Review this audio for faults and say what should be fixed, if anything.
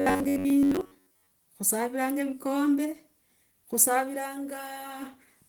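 Robotic sound from repeated short buffers, from 0.01 to 1.31 s, ending just before "khusaviranga vikombe". The speech collapses into a rigid metallic buzz near 94 Hz that only loosely tracks the syllables. That pitch points to a slice of roughly 10.7 ms being replayed while most of the real audio over this stretch goes missing. The likely cause is a starved capture or playback buffer. Fix it by enlarging the buffer or removing whatever stalls the audio thread.

Opus voice compression runs through the whole clip. Content reaches about 20 kHz, but the sound is plainly damaged, which fits hybrid-mode Opus at a low bitrate around 16 kbps with 20 ms frames. The lower band goes through the linear-prediction coder and the top through the transform layer, both starved of bits. Speech turns hoarse and slightly robotic. Fix it by encoding at a higher bitrate.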